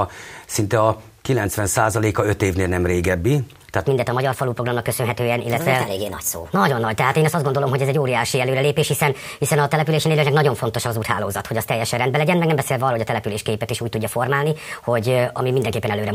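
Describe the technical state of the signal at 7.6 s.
At 7.6 s the audio sits inside a section at the wrong speed that runs from 3.87 s to the end of the clip. It plays 1.26 times faster than recorded, likely because it was fitted to the wrong clock, so everything sounds hurried and roughly four semitones high. On a spectrogram, harmonics and formant bands jump upward at 3.87 s and stay raised. In the waveform, envelopes and transients arrive closer together than before.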